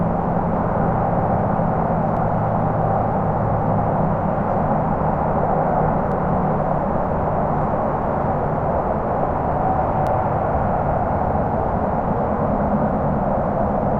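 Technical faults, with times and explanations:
2.17, 6.12 and 10.07 s, audio missing between chunks: the likely cause is a recorder handling the audio in 4-second blocks and dropping around 50 ms at each handover, so the sound jumps abruptly forward at evenly spaced points, with the two sides butted together without any gap.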